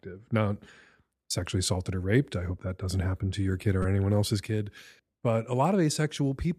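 At 2.32 s, a repeated buffer gives a brief click. Fresh audio arrived late, so a piece of about 5.3 ms played twice. That fits a 256-sample buffer. At 3.82 to 3.85 s, a piece of the same size repeats four more times. It sounds like a short buzz.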